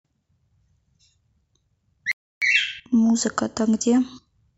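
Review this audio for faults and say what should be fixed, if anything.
A rebuffering stall interrupts the speech at 2.12 s. The sound cuts to silence and stays silent until 2.42 s. It then picks up exactly where it stopped, with nothing skipped. The player ran out of downloaded audio and had to wait for more data. That wait adds about 0.3 s to the playback. To prevent it, buffer more audio before playback starts and lower the bitrate when the connection slows.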